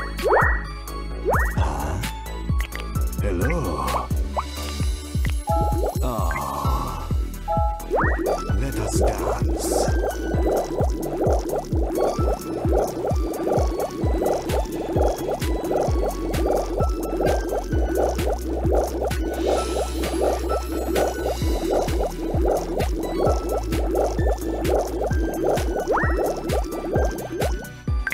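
Nothing in this one trips the ear: there are no dropouts, glitches, distortion or other technical faults to report anywhere along the way.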